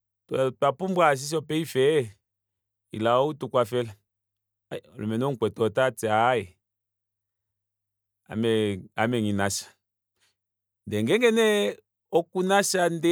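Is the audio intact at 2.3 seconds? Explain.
Yes, at 2.3 seconds the speech plays through intact, with no audible dropout, click, distortion or other fault at that point.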